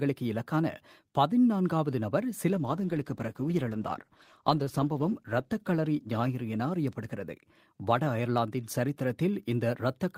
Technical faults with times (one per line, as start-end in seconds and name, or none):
2.54-8.37 call bitrate drop